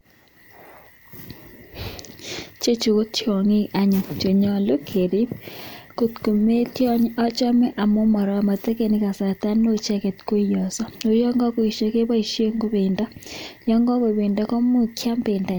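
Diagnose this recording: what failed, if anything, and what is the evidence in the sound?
Nothing in this recording points to a failure at any stage of the chain, so there's really nothing to diagnose here.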